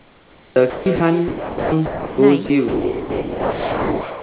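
Speech, with a mains buzz throughout: a steady, raspy 50 Hz buzz, roughly 25 dB below the speech. Switching spikes twice per mains cycle push harmonics well up the band, so the rasp sits across the whole call and is not just a low hum. Echo with no canceller also runs throughout: every phrase is shadowed about 11 dB down and around 300 ms later by a thinner copy, as the far end's loudspeaker feeds its microphone and nothing subtracts it. Comfort noise in place of the background fills 0 to 0.56 s. The real background gives way to a smooth, featureless hiss about 10 dB quieter, the likely result of the sender going silent between utterances while the receiver synthesises filler noise. An onset clipped by the voice detector follows at 0.54 s: about 20 ms of the first sound is missing, so the speech starts abruptly without its soft attack, likely because the detector reacted late and comfort noise covered the gap. 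Sound dropped by the voice detector occurs at 0.70 to 0.86 s, 0.96 to 1.00 s, 1.28 to 1.72 s, 1.86 to 2.18 s, 2.46 to 2.50 s, and from 2.68 s to the end. Each time, stretches of sound vanish into steady noise, likely because the detector mistook them for background and stopped transmitting. Beneath all this, the audio is band-limited to 4 kHz, which fits a G.711 narrowband call path.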